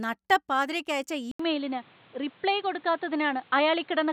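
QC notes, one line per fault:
1.31–4.12 s, input switched to a poorer device: after "നട്ടപ്പാതിരക്ക് അയച്ച" there's an 80 ms gap, then dull, boxy speech capped at 4.4 kHz, same level, faint new background noise; likely a narrower-band mic.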